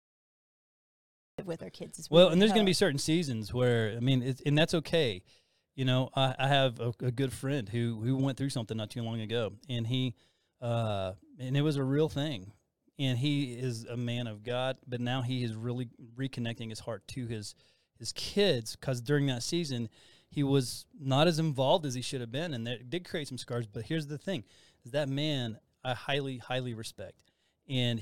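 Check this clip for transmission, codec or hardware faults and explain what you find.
One fault is present, a cut-off start. The clip sits in digital silence from 0.00 to 1.39 s, then speech enters abruptly mid-utterance at "with our kids as". Capture began late, joining sound already under way, so there is no natural attack or fade-in.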